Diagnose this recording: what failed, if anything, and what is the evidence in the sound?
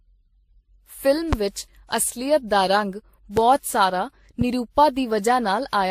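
At the codec stage, the speech carries layered, mismatched compression smear with nothing above 16.3 kHz, likely from transcoding between lossy codecs, such as MP3 then Vorbis then WMA.

In the analogue wiring, there are three loud pops, likely from voltage spikes: 1.33–1.35 s just before "ਵਿਚ ਅਸਲੀਅਤ ਦਾ ਰੰਗ" (about 15 dB up), 3.37–3.40 s right after it, and 4.41–4.44 s.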